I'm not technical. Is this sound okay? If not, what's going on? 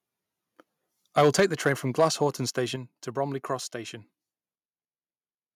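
No. Microphone overload at 1.17 to 1.72 s and again at 1.99 to 2.23 s gives the loudest parts of the speech a harsh, crackly edge. The input was most likely set too high, so the tops of the strongest sounds got sliced off.

Microphone volume stepped down at 1.4 s and 2.76 s: the voice and the background both suddenly get quieter in a single jump. This is likely the call software noticing the overload and turning the microphone down.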